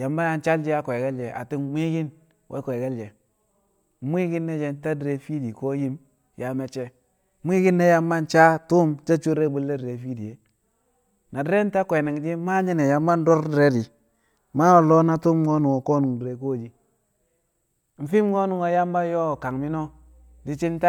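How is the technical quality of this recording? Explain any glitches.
The one real problem is at the tail. From about 19.30 s through to the end, mains hum comes in: a steady 60 Hz drone sitting roughly 30 dB under the speech. That's power-line energy leaking into the signal, typically through a ground loop or a nearby transformer, and it's heard as a low, constant buzz under the speech.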